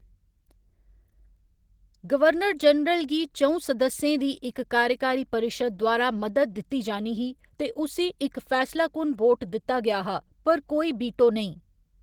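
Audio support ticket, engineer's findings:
Opus voice compression, whole clip, plainly audible. Speech sounds a bit hoarse and slightly robotic, with coarse texture.

Probable component: the encoder running hybrid mode, SILK doing linear prediction below 8 kHz and a CELT layer on top. The damage fits a low bitrate, somewhere around 16 kbps, and 20 ms frames. Band isn't narrowed, content reaches about 20.2 kHz, but the excitation's clearly starved.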